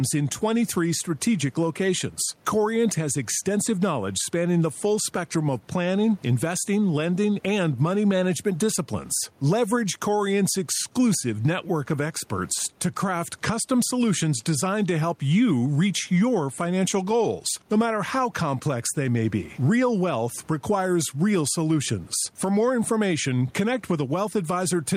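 Throughout the recording the level breathes: the room noise normally sits about 38 dB below the speech, and the gain swings by something like 10 dB as the speech gets loud. Loud and quiet passages end up squeezed together, giving a flattened, squashed delivery. This is gain pumping, likely from input gain set far too high with a fast limiter or compressor clamping down on each loud sound.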